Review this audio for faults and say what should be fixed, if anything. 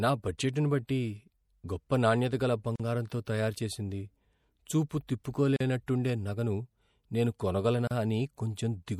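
The speech was likely squeezed through heavy MP3 compression, around 64 kbps going by the plainly audible damage, leaving swirly watery texture and smeared consonant attacks throughout. Separately encoded pieces were joined without trimming encoder delay and padding, opening a gap at a join of encoded pieces of about 40 ms at 2.76–2.80 s, between "గొప్ప నాణ్యత గల" and "తయారు చేసింది", 41 ms at 5.56–5.60 s, and 34 ms at 7.87–7.91 s. Encode the full take once at a higher bitrate, or use gapless trimming when joining pieces.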